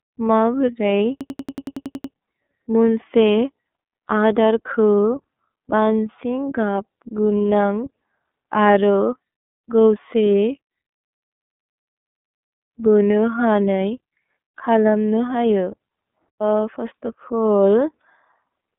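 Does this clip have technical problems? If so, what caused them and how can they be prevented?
Yes. Throughout the clip the speech sounds thin, boxed-in and slightly rough, with a synthetic edge. The band runs from about 200 Hz to 3.6 kHz and nothing is heard above 3.8 kHz. This is iLBC codec damage. The narrowband VoIP codec rebuilds each frame's excitation independently, and the grain here fits its 13.33 kbps mode with 30 ms frames. To prevent it, carry the call over a wideband codec such as Opus, or record locally rather than from the phone line.

From 1.21 to 2.14 s, and again from 11.05 to 12.73 s, a short fragment repeats as a machine-gun stutter at about 10.8 Hz, 10 times and then 18 times. This is a system hang loop. The machine or audio driver froze while the sound hardware kept replaying the same ring buffer. The 92.88 ms cycle fits a 4096-sample buffer. Little or nothing of the speech appears lost; the stutter holds it up rather than replacing it. 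To prevent it, fix the driver or system stall, for example by updating drivers and keeping the audio thread from being starved of CPU.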